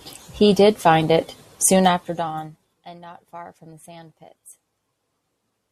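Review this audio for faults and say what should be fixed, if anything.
Zipper noise from 1.79 to 2.82 s: the gain is lowered in unsmoothed 2 dB steps, around ten a second, bringing the level down by roughly 25 dB. Each jump leaves a small click, so a ticking zip rides on the speech as it fades. Ramping the gain per sample, or interpolating it across each buffer, would prevent this.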